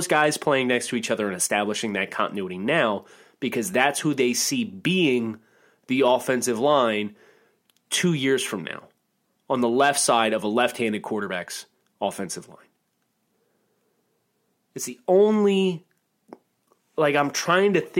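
Nothing here jumps out as a technical problem; the speech just rolls along from beginning to end without anything going wrong.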